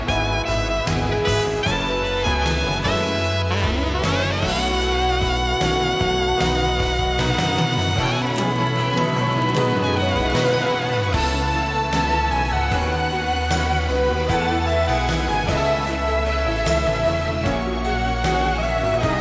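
From 7.37 s to 11.09 s you get the resampler restarted on every block. The audio was chopped into 10 ms blocks and each one was converted on its own, which fits a drop from 48 kHz to 16 kHz, so the filter never saw the real neighbouring samples at the block edges. Each edge picks up a small error, and at 100 per second those errors merge into a 100 Hz buzz that rides along only while there's signal.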